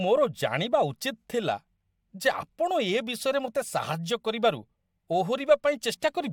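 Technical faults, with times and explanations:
Nothing technical goes wrong anywhere in this speech clip, so there's nothing to flag here.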